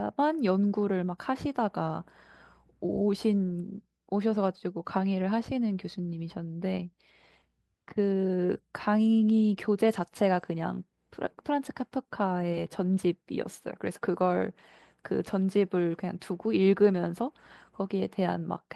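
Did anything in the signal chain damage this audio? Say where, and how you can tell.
No, nothing damaged this audio.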